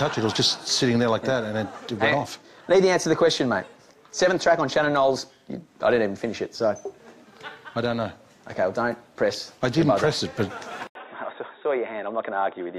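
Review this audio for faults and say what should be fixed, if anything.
Input switched to a poorer device, from 10.87 s to the end at 12.78 s: after an 80 ms silence the sound loses everything above 3.8 kHz, drops roughly 5 dB, and carries a new noise floor about 50 dB down, likely from the system changing to another microphone or a headset's call profile. Lock the input device and disable automatic switching before recording.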